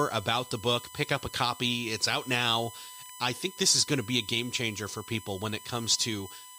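USB whine runs through the whole speech clip: a fixed-pitch tone built on 1 kHz, strongest at its 8 kHz multiple, sitting fairly prominently under the voice. Current drawn in the USB bus's regular frames leaks through power or ground into the audio path.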